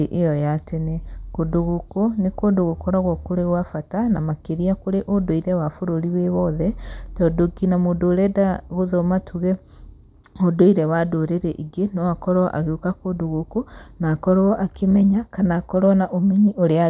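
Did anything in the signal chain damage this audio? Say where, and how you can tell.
No, nothing in the signal chain damaged this audio.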